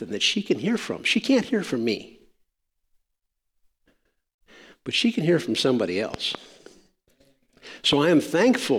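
It's a speech clip with a loud pop problem. Just after "can hear from somebody", a double pop runs from 6.14 to 6.37 s, then a single one lands at 7.93 to 7.95 s. Both jump well above the speech, which carries on underneath, likely from voltage spikes getting into the chain.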